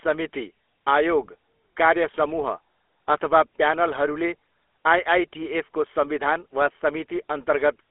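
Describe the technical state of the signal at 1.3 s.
At 1.3 s you're hearing the GSM full-rate codec, same as across the whole clip. It rebuilds speech from a vocal-tract model fed by a thinned pulse excitation, and the result sounds buzzy and gravelly, consistent with a 13 kbps GSM link. The band sits around 300 Hz to 3.5 kHz, with nothing above 3.8 kHz.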